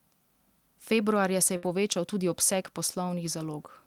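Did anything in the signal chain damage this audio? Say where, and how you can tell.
Yes. The damage happened in the network stage. A burst of packet loss runs from 1.56 to 1.65 s. The receiver's concealment filled about 63 ms by stretching the last received sound and fading it down, and about 60 ms of the original audio never arrived. On a spectrogram the frequency pattern freezes into a flat, fading smear instead of moving on. The waveform then jumps abruptly to the later audio.

Straight after, from 1.65 to 1.67 s, comes a lost packet rebuilt from error correction. That single 20 ms frame was recovered from the low-bitrate copy carried in the next packet, so there is no second gap. The frame sounds grainier and noisier, though. On a spectrogram it shows as a short block of coarser, noisier texture.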